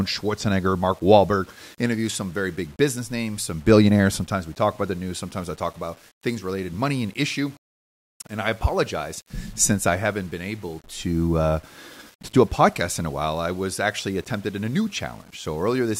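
Low bit depth without dither runs through the whole of this speech clip: a grainy distortion that rides on the signal and changes with it, sitting roughly 30 dB below the level of the speech. Quiet passages sound gritty, and the softest moments sputter or drop away. The likely cause is rounding to very few bits with no dither, which fits an 8-bit word, so the error tracks the waveform instead of forming a steady hiss.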